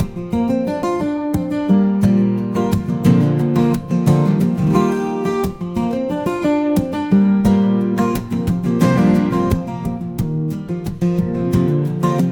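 No technical faults can be heard anywhere in the recording, and the signal holds steady and intact throughout.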